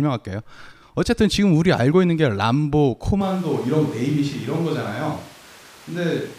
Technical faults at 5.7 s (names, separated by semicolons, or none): switch to a distant microphone